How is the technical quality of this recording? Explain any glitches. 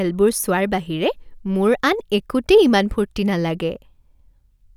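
No glitches can be heard, and the recording's technical quality holds steady throughout.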